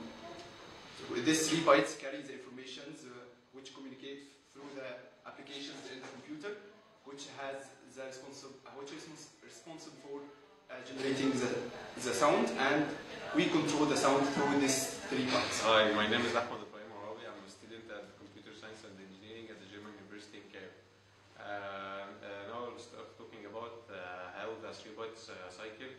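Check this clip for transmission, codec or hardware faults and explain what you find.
Two kinds of fault are present: zipper noise on three level changes, and two short bursts of damaged data in the compressed stream.

Zipper noise occurs at 1.72–2.08 s, 10.84–11.20 s and 16.36–16.72 s. In each, the gain jumps in discrete steps at around 30 a second instead of gliding. The first and third are fades down of about 15 dB, and the second is a rise of about the same amount. Steps are 2 dB in the first two and 1 dB in the third. Every jump leaves a tiny click, so each move carries a fast zipping texture, finer in the 1 dB case.

Damaged data in a compressed stream appears at 9.96–10.01 s and 25.45–25.51 s. Corrupted bytes leave the decoder unable to parse those frames. It loses sync and hunts for the next valid frame header, producing a brief chirp or blip lasting roughly 40–50 ms.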